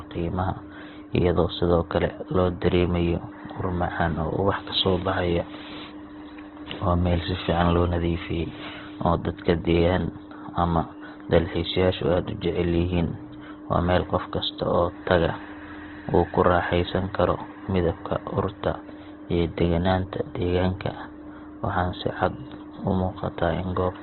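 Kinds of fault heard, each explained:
Opus compression: the speech sounds rough, grainy and noisy throughout, with nothing above 4.2 kHz, giving a narrow, boxed-in tone. This is likely heavy Opus coding in its music mode, filling starved bands with folded or noise-like content, which fits a bitrate near 12 kbps.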